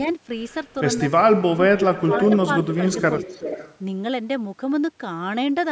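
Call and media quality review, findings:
Speech suppressed in double talk, 1.5–2.13 s: near-end level pumps down in pieces, deepest dip around 25 dB, roughly half a second affected in total. Likely the near-end echo canceller clamping during overlap. Unlike packet loss, the gaps follow the other side's activity, not fixed frame-sized holes.

Echo leak at 2.11–2.37 s, 2.62–3.02 s and 3.19–3.76 s: a delayed copy of the voice returns about 375 ms late each time, at about 5, 15 and 10 dB below the speech. Likely a loudspeaker-side canceller passing residual. Unlike room reverb, this is a discrete repeat at a fixed lag, not a diffuse tail.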